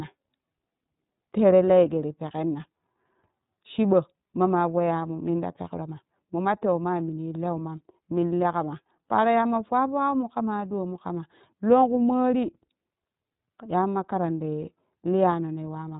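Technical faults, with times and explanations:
Throughout, iLBC codec. The speech is band-limited to narrowband, with nothing above 4 kHz, so it sounds muffled and telephone-like. The damage is plainly audible. Voiced sounds come out slightly rough and synthetic. Each block of the signal has its excitation coded on its own, without drawing on the block before. The texture fits 30 ms frames at about 13.33 kbps, iLBC's lower-rate mode.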